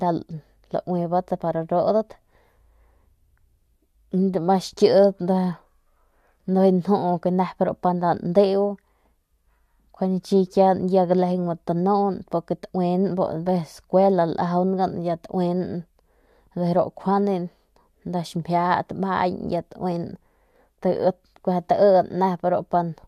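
Nothing in this recording stands out as a technical fault; the speech comes across without any glitch, dropout or distortion worth pointing to.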